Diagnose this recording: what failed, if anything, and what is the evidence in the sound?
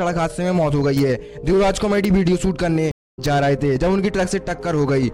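Network stream reconnect: the connection dropped and a fresh decoder started mid-stream. There is 0.21 s of silence from 2.91 s, then the sound resumes roughly 0.15 s ahead.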